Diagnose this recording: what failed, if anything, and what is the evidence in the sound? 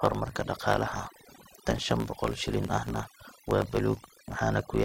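Overdone noise removal in the call processing stage cuts bands near its noise estimate throughout, leaving a lowered background that breaks up into twinkling specks.

A truncated block size mismatch at the buffer stage discards each block's tail, producing a 54.4 Hz buzz throughout and speech running 1.16 times fast at near-normal pitch, consistent with 1024-sample blocks.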